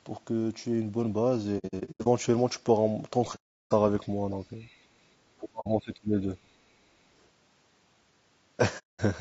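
Throughout this speech clip the voice sounds rough and grainy, with noise filling the gaps between harmonics and a thin, synthetic top band. That points to likely low-delay AAC compression (AAC-ELD) at a rate that fits about 32 kbps, where short frames resolve pitch poorly. On a spectrogram the harmonic lines look smeared and the upper band looks blotchy. AAC frame loss with muting punches soft-edged holes in the sound. From 1.58 to 2.07 s, 300 ms drops out in pieces scattered over nearly half a second, the longest gap around a tenth of a second. Further holes come at 3.35 to 3.72 s (360 ms), 5.60 to 5.67 s (60 ms) and 8.78 to 9.00 s (210 ms). Each appears on the waveform as a tapered fade to silence and on the spectrogram as a blank vertical band. From 4.59 to 4.78 s a faint second voice, about 35 dB below the talker, is the other side's voice leaking through, likely loudspeaker echo the canceller missed. 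It shows as a weak, separate harmonic smudge. From 5.23 to 6.31 s, speech suppressed in double talk takes the talker's level down by as much as about 35 dB across roughly a second, likely because the echo canceller turned down both the talker and the loudspeaker echo while the far end spoke. The waveform envelope sags there and the spectrogram thins out.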